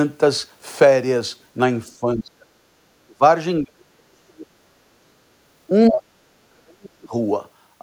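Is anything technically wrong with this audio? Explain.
Yes. The speech repeatedly drops out or sinks by about 30 to 40 dB at 2.0–2.5 s, 3.02–3.22 s, 3.64–4.54 s, 5.01–5.37 s, 5.89–6.09 s and 6.46–7.14 s. The pattern fits speech suppressed in double talk: an echo canceller likely mistook overlapping far-end talk for echo and turned the talker down.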